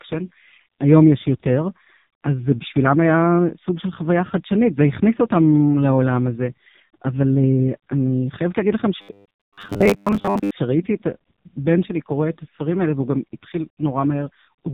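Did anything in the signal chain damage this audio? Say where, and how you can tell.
Yes. At the codec stage, AMR narrowband mobile codec damage runs throughout: the speech is cut off above 4 kHz and sounds heavily buzzy, which fits a low mode around 5.15 kbps.

At the driver or buffer stage, robotic sound from repeated short buffers appears from 9.02 to 10.51 s as a rigid 100 Hz buzz, likely from 10 ms buffers replayed over most of the span.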